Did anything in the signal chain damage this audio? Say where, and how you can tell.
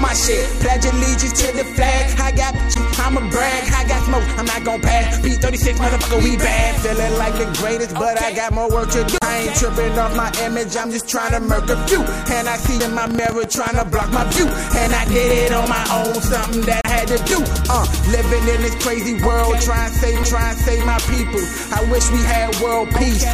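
Yes. Playback from the disc is damaged by CD skips at 9.18 to 9.22 s, 12.80 s, 16.81 to 16.85 s and 20.23 s. Each is a tick and a brief mute, then the sound resumes from a different point on the spiral. A waveform shows a short flat gap with an abrupt discontinuity at the restart.

A train of clicks runs from 12.66 to 15.32 s, around thirty sharp, similar pulses at about 9.45 per second with irregular spacing, peaking about 10 dB above the sound. The likely cause is interference in the analogue wiring. A spectrogram shows thin full-band vertical lines; a waveform shows narrow spikes.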